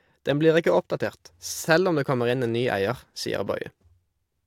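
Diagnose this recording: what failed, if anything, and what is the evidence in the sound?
Nothing failed; no fault is audible in this recording.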